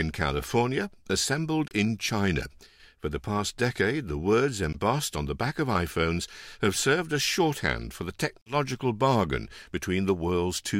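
The speech cuts out three times, at 1.68 to 1.73 s, 4.73 to 4.75 s and 8.42 to 8.55 s. Each gap is a sudden hole of silence with abrupt or briefly faded edges. The sound then resumes further along, as though it kept playing during the gap. About 30, 15 and 46 ms of audio go missing, which fits two, one and three lost frames. This is likely a Bluetooth dropout, with packets arriving too late to play.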